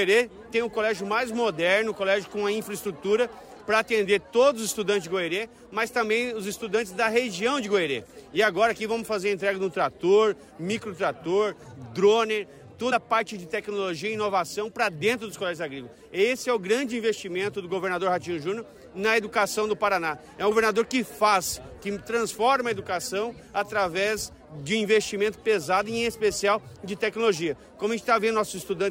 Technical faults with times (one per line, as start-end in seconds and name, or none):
12.91 compressed frames skipped
20.51 compressed frames skipped